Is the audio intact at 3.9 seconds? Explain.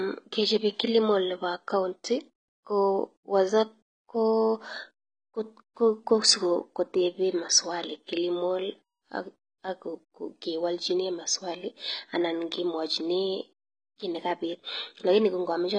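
No. At 3.9 seconds, as throughout the clip, the speech is dull and smeared, with a warbling, fizzy texture on sustained sounds and sibilants and a lowered top end. This is likely AAC compression, consistent with AAC-LC at a low rate around 24 kbps. The encoder quantises each frame's frequency lines against a hearing model, and at this rate it cuts high frequencies and leaves spectral holes, producing the plainly audible damage.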